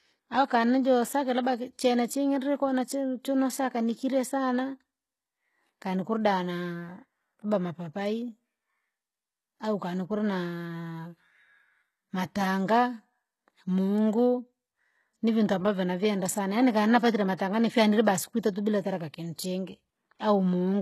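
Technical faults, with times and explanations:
throughout HE-AAC compression: treble is likely rebuilt from copied lower bands rather than coded, fitting a bitrate near 16 kbps, so sibilants turn gritty and metallic, with nothing above 12.3 kHz.
17.37–17.39 s pre-echo: the codec spreads quantisation noise across a block, so about 21 ms of hiss precedes the attack between "navyenda sana yaani kanapatire" and "nifyanile basi kwitatu bila", smearing its onset.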